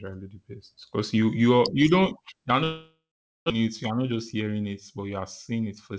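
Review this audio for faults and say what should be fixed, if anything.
A long network dropout, likely a run of lost packets, hits from 2.64 to 3.52 s. The receiver stretches the last sound into a fading buzz, then holds silence for about 450 ms. On a spectrogram the harmonics smear into a decaying band and then go blank; the waveform flattens to near zero. Adding packet redundancy or forward error correction on the G.722 stream, whose band already stops at 8 kHz, would reduce this.

A jitter buffer speed-up runs from 3.60 to 5.92 s. The receiver trims pitch-period-sized pieces to shed about a fifth of a second of backlog, so the speech plays at 108% with unchanged pitch and sounds hurried. The waveform shows slightly compressed syllable spacing with no spectral shift. A smaller, more stable buffer target would keep backlog from building after the dropout.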